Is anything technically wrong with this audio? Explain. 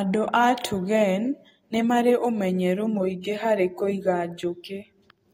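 Yes, there's one fault. From about 3.21 to 3.24 s there's pre-echo: a short burst of hiss lasting roughly 26 ms that arrives just ahead of a sharp onset in the speech. The codec handles audio in blocks and spreads its quantisation noise across the whole block, so noise meant to be masked by the loud attack leaks into the quiet stretch before it. You hear that hiss creeping in early, and the attack itself comes across softened and smeared.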